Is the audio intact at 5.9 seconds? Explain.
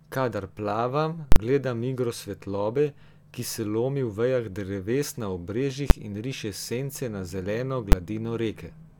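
No. Right after "vejah dreves na", at 5.9 s, a single sharp bang cuts through the speech. This is invalid numbers at full scale: a calculation produced infinite or invalid values, pinning the output at maximum level for a 10 ms block.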